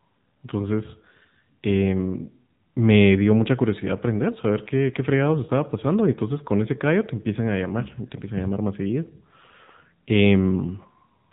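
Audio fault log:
throughout, AMR narrowband mobile codec: speech sounds boxed-in and telephone-like, with nothing above 4 kHz and a plainly audible buzzy, synthetic edge. Narrowband coding rebuilds the voice from a vocal-tract model driven by sparse pulses, and the coarseness fits a low 7.4 kbps mode.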